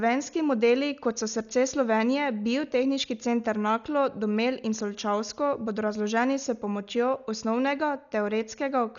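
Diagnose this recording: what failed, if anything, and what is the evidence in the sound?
Dolby Digital compression, heard throughout the speech, likely from encoding at the codec stage. The band stops dead at about 6.9 kHz, leaving the sound dull, and a rough, fluttering noise clings to the voiced tones. The damage is heavy, which points to a very low bitrate, around 48 kbps. Starved of bits, the encoder cut the upper band and left many frequency lines without mantissa data, so the decoder filled them with dither noise.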